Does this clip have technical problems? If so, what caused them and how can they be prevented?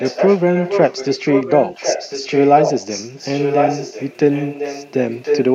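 Yes, there's an echo leak running through almost the whole clip: a copy of the speech trails about 1.05 s behind, from 0.0 to 4.92 s only a little quieter than the original, then again from 5.09 to 5.44 s at roughly the same level as the speech. That's likely a far-end loudspeaker feeding its mic, with the echo canceller missing it. To prevent it, get that side onto a headset or give its canceller better tuning.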